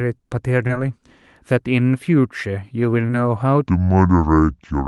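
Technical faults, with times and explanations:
0.67–0.71 s and 3.07–3.11 s, short concealed packet loss: brief smears where about 20 ms of audio never arrived, and the receiver extended the preceding sound to bridge each gap.
3.67–4.88 s, section at the wrong speed: the speech drops to a deep, dragging pitch about seven semitones lower, likely from playback at 0.65 times the original speed.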